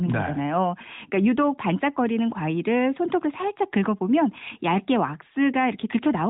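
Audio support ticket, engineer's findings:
No faults found in this audio.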